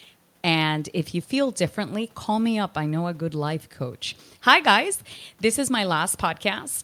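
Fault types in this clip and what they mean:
No technical faults can be heard in this recording.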